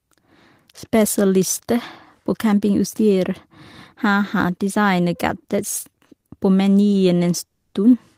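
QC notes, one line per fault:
5.39 s, 6.06 s and 6.20 s: short stall from a late packet, three times. At each point a packet arrived after it was due and the jitter buffer emptied, so the receiver held the last bit of the speech until the data caught up, about 30 ms at 5.39 s, 20 ms at 6.06 s and 30 ms at 6.20 s. Each is heard as a brief smear or faint buzz on a sound that lasts a touch too long, and nothing is skipped afterwards. What sets these apart from a freeze is the length, too short to register as a break in the speech.
7.46 to 7.74 s: call audio freeze. The speech locks up for about 270 ms. The last sound carries on as a fading buzz that falls to roughly 70 ms of silence before the speech picks up exactly where it stopped, with nothing lost. The delay was likely packets being held up in transit, which starved the jitter buffer. Unlike the short stalls, this one is long enough to put a pause into the speech, and the timing after it is pushed back.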